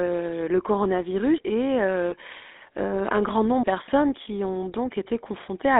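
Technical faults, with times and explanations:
throughout, GSM full-rate codec: the sound is confined to a telephone line band of 250 Hz to 3.7 kHz, and the coding damage is plainly audible as a buzzy, gravelly roughness, which fits 13 kbps full-rate GSM. The codec rebuilds speech from a vocal-tract filter driven by sparse, evenly spaced pulses, so fine harmonic detail is lost. A spectrogram shows a hard ceiling near 3.7 kHz, little energy below 250 Hz, and blurred, grainy harmonics.
2.10 to 2.14 s, lost GSM frames: a brief dropout, which points to a single 20 ms frame going missing. The decoder repeats the last good frame's settings, so the sound briefly freezes into a rough, metallic ring. On a spectrogram the formant pattern stops moving and smears into flat horizontal bands for that instant. On the waveform a short stretch repeats before normal decoding resumes.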